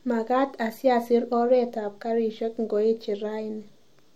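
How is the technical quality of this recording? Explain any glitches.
No glitches or technical faults are audible anywhere in the recording.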